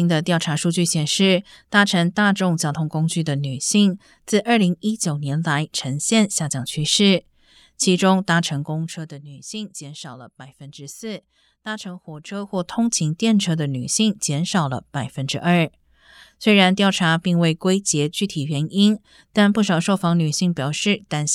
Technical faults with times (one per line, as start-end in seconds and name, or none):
8.56-9.22 zipper noise
12.28-12.72 zipper noise